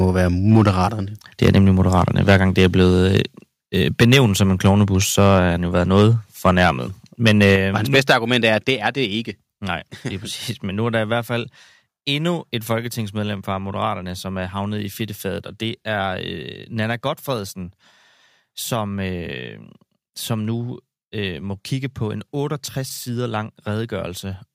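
From 0.03 to 0.85 s, 1.42 to 3.2 s, 4.01 to 5.39 s, 5.95 to 6.71 s and 7.26 to 8.49 s the speech shows microphone overload. The peaks run about 5 to 10 dB past the converter's limit, and the loudest passages around 4 to 5 s carry about 10 dB of excess. The likely cause is an input volume set too high, so the converter flattens the tops of the waveform. This is heard as a hard, crackling grit on the strongest syllables.

The microphone volume is stepped down at 4.03, 7.56, 8.59 and 12.78 s, by about 2, 5, 3 and 2 dB. The first two cuts fall within overloaded passages and the third comes just after one. Each is likely the call software's gain control responding to an input it found too loud or clipping and lowering the device's input level in a single jump. Voice and background drop together at each step, giving an abrupt loss of loudness rather than a smooth fade.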